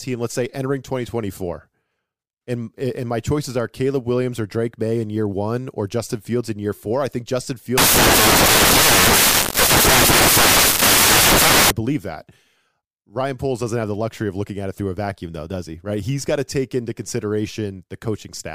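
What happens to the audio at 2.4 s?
Nothing goes wrong at 2.4 s: the speech carries on intact through that moment, with no dropout, click, distortion or other fault.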